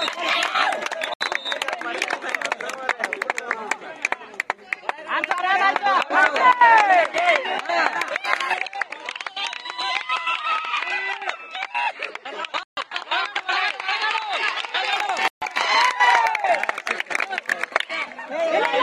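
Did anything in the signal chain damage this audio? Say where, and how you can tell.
Yes. Sharp-edged holes at 1.14 s (71 ms), 12.63 s and 15.28 s (about 140 ms each): blocks of digital silence from the driver or buffer stage not filling output in time.

From 8.54 to 14.93 s the sound turns duller, nothing above 9.7 kHz, about 5 dB quieter with fresh background noise: likely the input switched to a poorer device.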